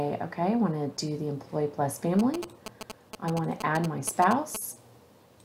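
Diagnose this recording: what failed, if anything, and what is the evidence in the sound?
Galloping ticks and short 217 Hz buzzes from 2.19 to 4.57 s: GSM signalling bursts from a nearby phone, rectified in the analogue wiring.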